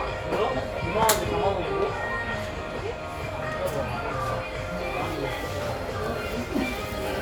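A recording of sounds, with no technical fault to be heard anywhere in it. Nothing in the audio points to a problem in how it was captured or processed.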